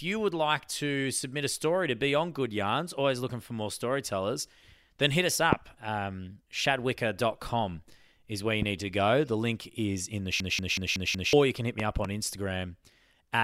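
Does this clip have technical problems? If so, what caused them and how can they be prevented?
Yes. Loud pops land at 5.53–5.55 s, just after "storytellers then hit us", about 20 dB above the sound; at 8.62–8.65 s, between "is where you" and "need to go", about 10 dB above; and as a double pop at 11.80–12.07 s, about 15 dB above. Each is likely a voltage pulse from a plug, switch or static, added on top of the continuing speech. On a waveform they appear as tall isolated spikes, and on a spectrogram as thin vertical broadband lines. Securing connectors, muting before switching, and controlling static would prevent them.

A system hang loop runs from 10.40 to 11.33 s, between "link is in the" and "you can hit". A frozen driver left the hardware replaying one 185.76 ms piece five times, a stutter at 5.38 Hz that fits an 8192-sample buffer, and about a second of audio is lost. The waveform shows identical repeating blocks, and the spectrogram shows a pattern copied side by side. 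Stable drivers and adequate system headroom during recording would prevent this.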